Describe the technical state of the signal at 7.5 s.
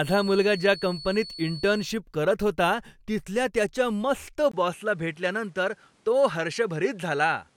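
At 7.5 s the speech is still on a poorer input device. The change begins at 4.52 s, right after "होता तिथल्या त्याच्या मस्त", with a 20 ms gap. It lasts to the end. The input likely switched to another microphone. Nothing comes through above 11.9 kHz. A new noise floor sits about 40 dB down. The level stays about the same.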